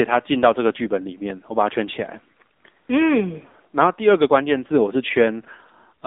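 Throughout, the speech has been squeezed through the AMR narrowband mobile codec at a low bitrate, and the buzzy, synthetic edge fits a mode near 8 kbit/s. Only about 250 Hz to 3.6 kHz survives, leaving the sound thin, boxy and dull.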